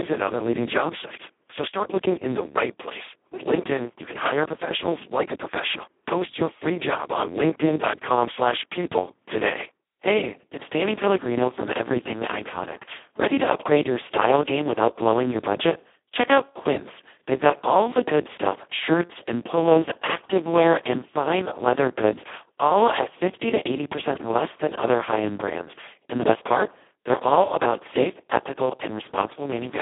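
From start to finish the speech carries Speex codec damage, and it is heavy. The voice sounds hoarse, buzzy and close to robotic, which points to the lowest-rate, vocoder-like mode at roughly 2 kbps, where too few bits remain to model the excitation. The sound is also squeezed into a telephone-style band of about 200 Hz to 3.5 kHz. On a spectrogram, energy stops sharply near 3.8 kHz, and harmonics look smeared and noisy instead of cleanly striped.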